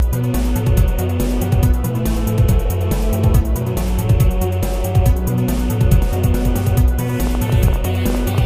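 From 7.27 to 8.39 s, a train of clicks ticks irregularly, about 9 per second, peaking a few dB above the sound. Likely interference or a faulty connection.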